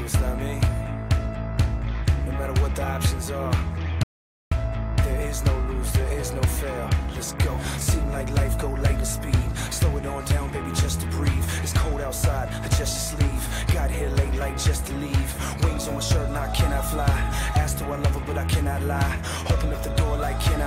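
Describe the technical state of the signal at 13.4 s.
At 13.4 s the signal is intact, with no audible fault at that moment.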